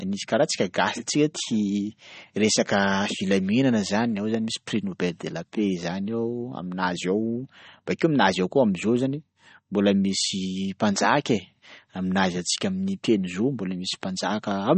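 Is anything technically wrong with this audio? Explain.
Yes. Throughout, the speech shows MP3 compression, likely from a low bitrate around 32 kbps: nothing above 8.4 kHz, plus watery, swirling artefacts from weak frequency lines switching on and off between frames, which plain low-pass filtering wouldn't produce.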